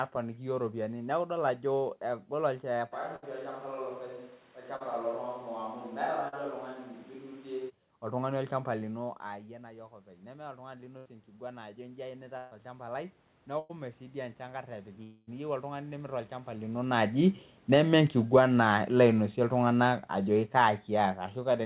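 At 2.94 s the sound turns roomy and hollow, with thinner bass, a level about 5 dB lower and background noise only about 25 dB below the speech. This is likely a switch to a distant microphone: the close microphone's feed dropped out and a farther pickup took over. The change back is abrupt, arriving at 7.68 s just before "oltung'ani olchamba".

Inside that stretch, from 3.16 to 3.24 s, a burst of packet loss removes about 60 ms. The receiver extends the last sound as a fading buzz or hiss, then jumps ahead to later audio.

At 4.76 to 4.82 s and 6.28 to 6.34 s, short concealed packet loss covers 40 ms holes. The decoder synthesises continuation from the preceding pitch or noise and crossfades back, leaving a brief smear or wobble where a short consonant may disappear.

After "oltung'ani olchamba", from 8.98 s to 16.76 s, automatic gain rising follows the talker moving back around 9.0 s, which drops the input about 17 dB. 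The control slowly adds about 14 dB, so the speech and room noise swell together over several seconds.

More bursts of packet loss land at 10.98 to 11.07 s (80 ms), 12.37 to 12.53 s (140 ms) and 13.59 to 13.71 s (100 ms). Each one is heard as a held, decaying tone or hiss followed by a skip forward.

From 15.03 to 15.29 s a long network dropout, most likely a stall in delivery, loses 240 ms. The concealment fades across the whole gap before the audio resumes further along.

From 16.83 s to the end, after the talker moves closer around 16.5 s, automatic gain falling starts with loud audio that then sinks steadily along with its background. Throughout, the G.711 call path caps the bandwidth at 4 kHz.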